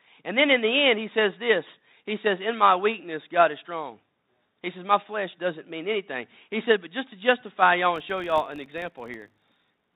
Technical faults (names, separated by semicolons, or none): filter restarted on every block